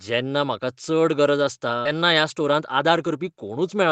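At 1.85 s, just after "गरज आसता", the speech skips ahead: roughly 400 ms of audio never reaches playback, and the two sides are butted together with no fill. The result is an abrupt jump, with the following syllables arriving early and clipped together.

From 1.95 s to 3.91 s a jitter buffer speed-up follows. The receiver trims short pitch-period chunks, about 200 ms in total. Speech runs at 109% with unchanged pitch and sounds rushed through the band-limited 8 kHz call audio.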